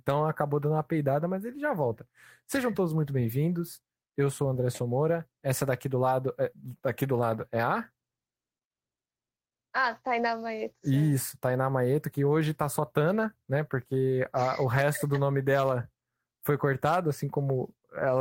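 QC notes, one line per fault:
No faults heard anywhere in this speech recording.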